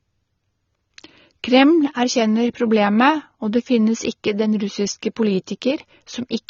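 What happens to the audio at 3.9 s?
At 3.9 s the speech has no content above about 7 kHz, and the same dull quality runs through the whole clip rather than starting there. The cause is likely low-bitrate audio saved at a high bitrate: the band limit and artefacts point to an earlier low-rate encode, perhaps around 24 kbit/s, later re-encoded as MP3 at a high rate. The larger file cannot restore the removed treble, so sibilants stay muffled.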